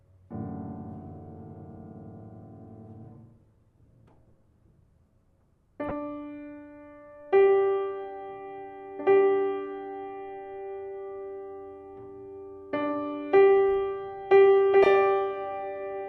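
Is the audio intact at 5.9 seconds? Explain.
No, not quite. Right around 5.89 to 5.91 s there's a short patch of DAB burbling. When weak reception lets bit errors slip past the error correction into the MP2 stream, corrupted samples put short blips of noise into single sub-bands, and corrupted scale factors make sub-bands jump in level for up to a frame. Here the error rate sounds like only a fraction of a percent, but it's enough for a quick burble over the audio that spans what sounds like a handful of frames.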